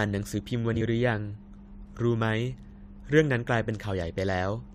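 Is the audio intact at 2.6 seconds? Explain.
Yes, at 2.6 seconds the speech plays through intact, with no dropout, click, distortion or other fault at that moment.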